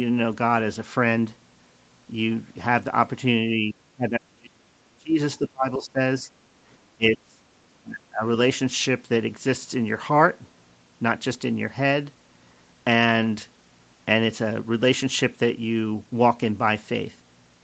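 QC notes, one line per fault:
3.51–8.24 s, speech suppressed in double talk: level drops at 3.51, 3.92, 5.39, 6.2, 6.96 and 7.82 s. The 3.51 and 6.2 s dips are shallow, about 5 dB; the others fall roughly 25–35 dB, chopping speech. Likely the echo canceller ducking both sides during overlapping talk.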